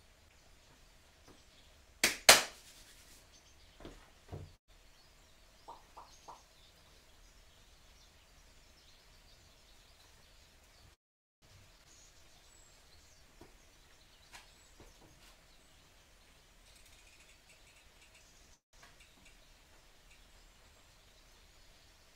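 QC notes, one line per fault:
4.55 s, 10.94–11.45 s and 18.54–18.76 s, call audio freeze: the sound halts and a brief fading tail decays almost at once into silence, leaving gaps of 0.13 s, 0.48 s and 0.19 s. It then resumes exactly where it stopped, with nothing lost. This is likely packets held up until the jitter buffer ran dry. Unlike a skip ahead, it inserts a pause rather than removing audio.
9.58–10.92 s and 14.55–18.44 s, jitter buffer speed-up: the audio runs at about 107% of normal speed with unchanged pitch, so it sounds hurried. The receiver trimmed many tiny pitch-period slices to shed excess buffered delay, about a tenth of a second in the first stretch and about 0.3 s in the second. The loss is spread out, with no single audible jump.
11.78–11.82 s, skip ahead: playback leaps forward, losing roughly 150 ms of audio. The two sides are joined by a fill of only 9 ms, so there is almost no gap. 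Unlike a freeze, material is cut out rather than delayed, and unlike a speed-up, the loss happens in one abrupt jump.
11.93–13.72 s, jitter buffer slow-down: the audio plays at about 92% speed with pitch held steady, so sounds are drawn out. The receiver repeated short pitch periods to rebuild its reserve after the preceding skip, adding 149 ms in total. The stretching is spread evenly rather than arriving as one pause, which separates it from a freeze.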